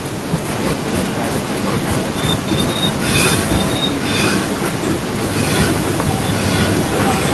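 From 0.52 s to the end, a copy of the speech returns 995 ms late, about 5 dB quieter than the original: an echo leak, likely a far-end loudspeaker echo the canceller failed to remove. A spectrogram shows speech patterns repeated about one second later; the waveform shows overlapping bursts.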